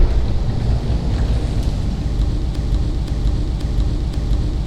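A recording of everyday sound that sticks at 2.55 s: from there to the end, a fragment about 0.53 s long plays four times in a row, identical each time and joined back to back, a classic broken-record loop. Whatever should have followed is simply gone, replaced by the repeating slice. The likely cause is a stalled player, encoder or stream that kept re-sending the last block it still held in memory instead of advancing.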